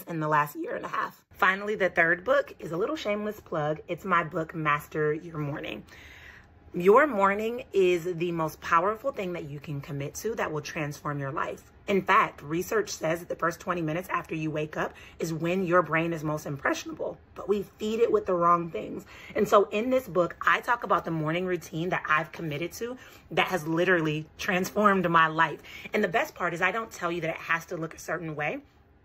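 No technical faults can be heard anywhere in the audio.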